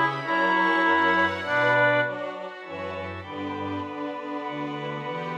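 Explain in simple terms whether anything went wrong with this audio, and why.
Nothing went wrong with this audio, and there is no technical fault anywhere in it. There is nothing here that needs fixing or explaining.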